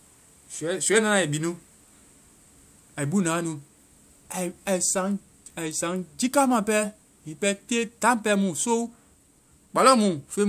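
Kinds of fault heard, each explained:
No kinds of fault are heard in this speech.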